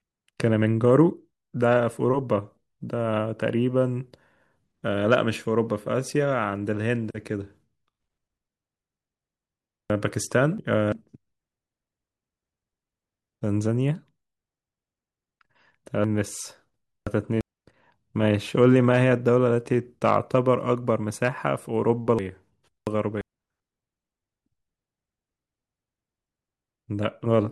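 Three jumbled moments break the flow of the speech, at 9.90 to 10.92 s, 16.04 to 17.41 s and 22.19 to 23.21 s. Each sounds briefly scrambled as the sound leaps back and forth. These are chunks out of order: a block of about 0.34 s plays after the blocks meant to follow it, which fits a delay of two chunks, then three, then two again.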